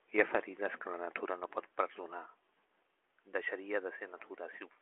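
The speech arrives through a G.726 ADPCM path at 40 kbit/s, confined to the 300 Hz to 3.4 kHz telephone band with nothing above 3.8 kHz, and no technical faults can be heard in it.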